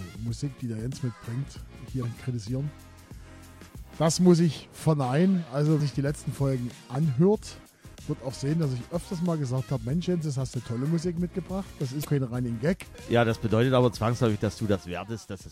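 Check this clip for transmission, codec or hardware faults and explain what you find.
Two kinds of fault are audible: three brief glitches from damaged data in a compressed stream, and a level drop near the end that points to one channel dropping out.

Short glitches break through at 2.00 to 2.04 s, 5.76 to 5.81 s and 12.01 to 12.05 s, each about 40 ms long. At each one, corrupted bytes make the decoder misread frames and lose sync. It then resumes at the next valid frame header.

From 14.76 s to the end, the sound abruptly falls by about 6 dB. The likely cause is one stereo channel dropping out. Once the channels are summed to mono, material shared by both loses half its contribution, which gives that 6 dB step.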